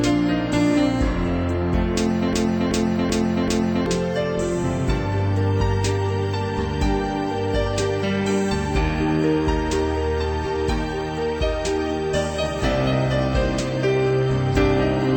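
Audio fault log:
2.33–3.86 s, broken-record loop: a chunk of about 383 ms plays four times back to back, identical each pass, so the sound stutters in place for roughly a second and a half before moving on. Whatever should have played in that stretch is simply gone. Most likely the player or stream stalled and kept re-sending the last fragment it had buffered until fresh data arrived, which is why the repeats are exact copies.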